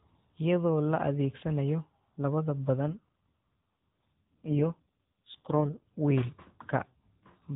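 From 2.87 s to 5.82 s an AMR rate drop occurs. The link pushes the codec into a lower mode, fitting a fall from 12.2 to 4.75 kbps. The band stays capped at 4 kHz with no gap, but the speech turns buzzy and synthetic until the rate recovers.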